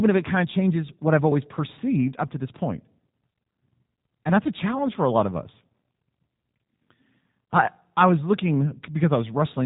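Speech, passed through the G.729 codec for its whole length. It sounds rough and slightly synthetic because the coder rebuilds it from a vocal-tract filter and pitch predictor, consistent with 8 kbit/s. A spectrogram shows a hard, flat ceiling with nothing above 3.8 kHz.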